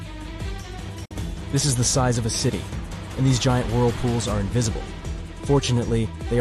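A digital broadcast dropout hits the audio from 1.05 to 1.11 s. The sound fades out in about 8 ms and then goes silent. About 48 ms of programme is missing, which fits two failed frames muted by the receiver. It resumes afterwards.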